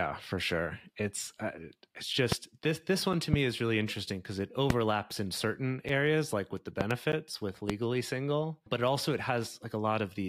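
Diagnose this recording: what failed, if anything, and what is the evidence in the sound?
Loud pops occur at 2.32, 3.34, 4.70, 6.81 and 7.70 s. The one at 6.81 s is a double, with two pops spread over about 0.12 s. Each pop rises to around 20 dB above the speech, and the speech carries on underneath. This is likely an electrical step from a plug, switch, static discharge or driver glitch, entering in the analogue wiring or driver stage and then shaped by the circuitry after it.

A block of digital silence at 7.12 s lasts about 11.6 ms. That is too short to register as a gap, so it is heard as a tick or dip, with abrupt edges and no fade. Its length fits a 512-sample buffer, pointing to the driver or buffer stage. Either the output buffer went unfilled in time or a calculation produced invalid values that were zeroed.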